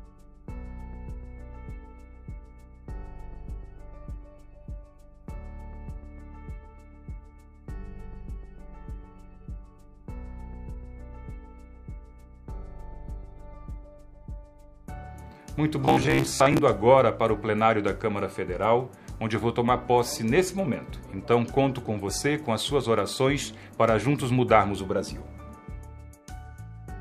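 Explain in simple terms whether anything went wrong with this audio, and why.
From 15.82 to 16.63 s the sound turns into a flat, metallic buzz at about 67 Hz, showing robotic sound from repeated short buffers. About half the audio is replaced by repeats of tiny 15 ms slices, likely because fresh audio arrived too late. Unlike a dropout, nothing goes silent.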